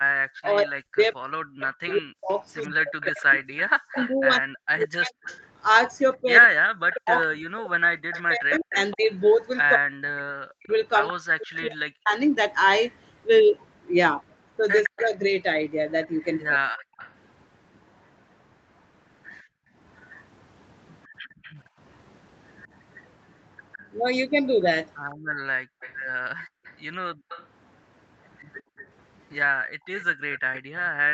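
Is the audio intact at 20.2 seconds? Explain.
No. Between 19.42 and 21.78 s the background is gated by the echo canceller. While the far-end loudspeaker played, the canceller pulled the microphone down hard, by about 40 dB at its deepest. The room sound drops out for a total of well under a second, then returns.

From 20.16 to 21.54 s a faint delayed copy of the speech trails it by 161 ms, around 25 dB below the main voice. This is likely an echo leak: the canceller did not fully remove what the microphone picked up from the loudspeaker.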